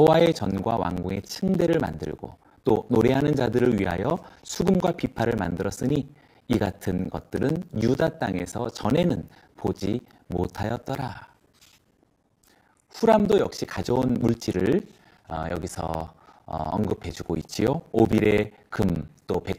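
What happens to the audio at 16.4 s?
At 16.4 s the sound falls inside a run of periodic USB or driver dropouts lasting from 0.07 s to 19.54 s. Every 64 ms, a background task stalls the audio path and roughly 10 ms of signal is replaced by silence, giving a steady ticking during speech. A waveform shows short flat gaps at even spacing. A spectrogram shows thin vertical blank strips edged by broadband click lines.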